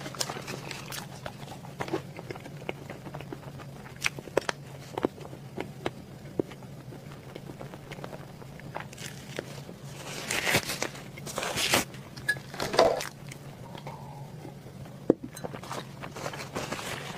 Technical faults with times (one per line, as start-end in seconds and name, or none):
7.00-8.71 processor overload crackle
12.46-13.92 processor overload crackle